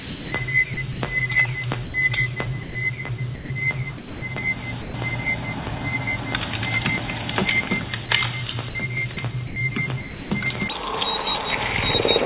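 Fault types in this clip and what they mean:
Sound chopped by the voice detector: The sending side's voice detector likely kept flipping on and off, so the sound turns choppy as bits get swapped for comfort noise, roughly 0.4 to 0.5 s in total within each of 0 to 1.01 s, 3.35 to 4.22 s and 8.69 to 10.31 s.
Sound dropped by the voice detector: Short moments where the sound just gives way to steady hiss, at 1.85 s (90 ms), 2.63 s (120 ms), 4.82 s (120 ms) and 8.06 s (30 ms), likely because the detector mistook quiet sound for background and stopped sending.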